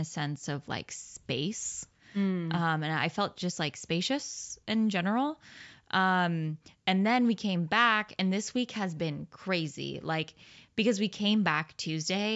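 No audible technical faults here.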